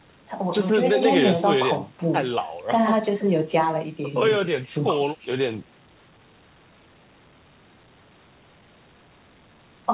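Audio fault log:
Nothing to log here: the speech comes through a call path with a narrowband sound and nothing above 4 kHz, which fits G.711 A-law at 64 kbps, and no fault turns up anywhere in it.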